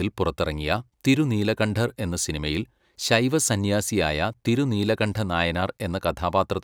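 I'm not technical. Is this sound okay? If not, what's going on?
Yes, nothing wrong can be heard in this recording.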